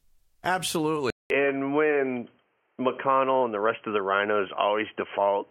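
At 1.10 s the speech drops out for about 0.2 s, then returns dull and boxy with nothing above 3.2 kHz, at much the same level and over a faint new noise floor about 50 dB down. This points to the input likely having switched to a poorer device, which holds until the end.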